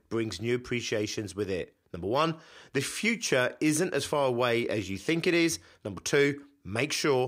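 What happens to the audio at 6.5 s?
Nothing goes wrong at 6.5 s: the speech carries on intact there, with no dropout, click, distortion or other fault.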